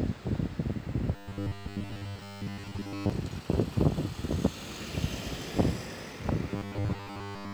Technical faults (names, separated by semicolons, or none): robotic sound from repeated short buffers